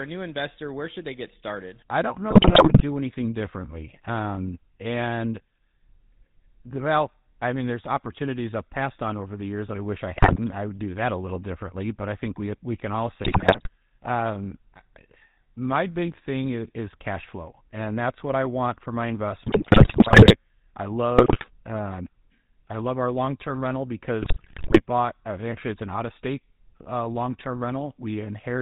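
Throughout, the speech has a buzzy, gravelly roughness with nothing above 4 kHz, the sound of the GSM full-rate codec's pulse-driven vocal-tract model. At 2.3–2.82 s, 10.16–10.39 s (after "that I wish I"), 13.24–13.69 s, 19.46–20.36 s, 21.18–21.48 s and 24.22–24.82 s (after "our long term rental"), the speech breaks into squawks, pops and gargling. These are GSM bit errors, where corrupted filter, pitch and gain values distort each damaged frame.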